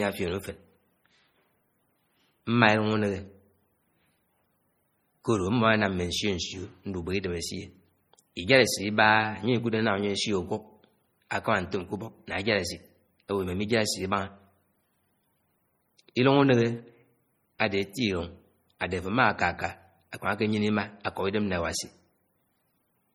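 MP3 compression runs through the whole speech recording, with heavy watery, swirling damage as weak frequency lines drop in and out, likely from a low bitrate around 32 kbps. Pre-echo at 17.59 s puts a hiss about 12 ms long before a sharp attack, because the codec's block spreads noise sized for the loud onset into the quiet moment just before it.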